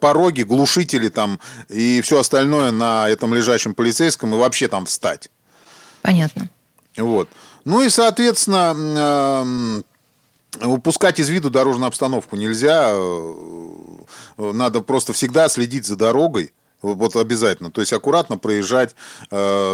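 Listening to this speech recording, nothing technical stood out as wrong at any point.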